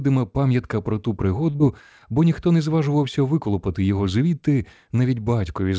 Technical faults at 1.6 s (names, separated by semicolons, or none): short stall from a late packet; short concealed packet loss